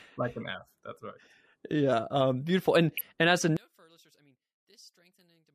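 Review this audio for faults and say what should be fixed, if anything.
From 3.57 s, right after "and as a", the speech drops by about 33 dB and turns into a faint trace that lasts to the end at 5.55 s. That's likely one channel inverted: with one side's polarity flipped, everything the two channels share cancels when they're summed to mono, so the centred voice all but disappears. To prevent it, check the polarity of both channels before folding down to mono.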